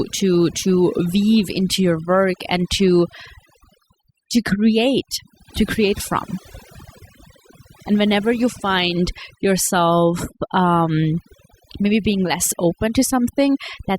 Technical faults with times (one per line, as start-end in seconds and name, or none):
0.00-13.99 overdone noise removal